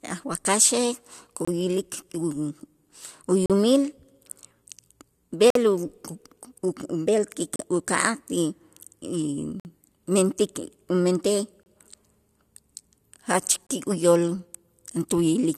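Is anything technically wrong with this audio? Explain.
Yes, there's a gap between stream segments, seven times: at 1.45, 3.46, 5.50, 7.56, 9.60, 11.63 and 13.67 s. The segment timestamps don't quite meet, so the player pads with silence, giving hard-edged holes of 25 to 52 ms in the speech. They recur every two seconds, which fits 2-second segments, and nothing is actually lost.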